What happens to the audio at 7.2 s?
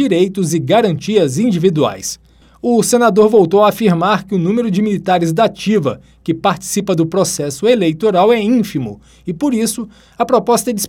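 Nothing goes wrong at 7.2 s; the audio runs through that moment intact, with no dropout, click or other disturbance.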